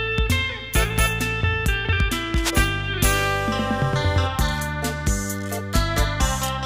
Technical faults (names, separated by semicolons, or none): cable scratch noise